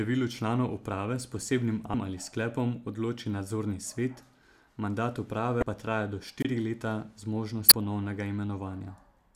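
At 1.91–1.94 s, 5.59–5.63 s and 7.68–7.72 s, damaged data in the compressed stream makes the decoder lose frame sync, producing brief glitches: broadband vertical smears on a spectrogram. At 6.39–6.45 s, a wireless microphone squelch dropout lets hiss rise before the receiver mutes for about 26 ms, leaving a flat gap in the waveform.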